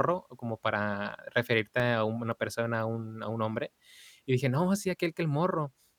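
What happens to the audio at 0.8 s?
Nothing goes wrong at 0.8 s; the speech there plays through intact, with no dropout, click or distortion.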